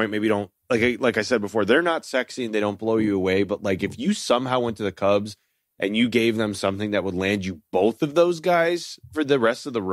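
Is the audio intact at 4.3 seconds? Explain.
Yes, the speech runs through 4.3 seconds intact, with no dropout, click, distortion or other disturbance at that moment.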